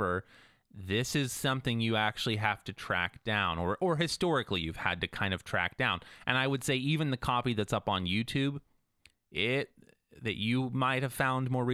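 Listening to this speech recording, nothing stood out as a technical problem at any point.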